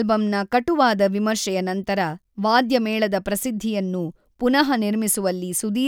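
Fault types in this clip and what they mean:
Nothing stood out on listening to this speech clip.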